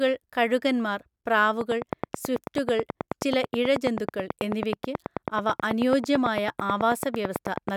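From 1.61 s to 7.70 s a train of clicks runs over the speech at a steady 9.2 per second, around fifty near-identical pulses peaking well above the voice level. The regular ticking continues through pauses, likely from electrical interference or a faulty connection or power supply.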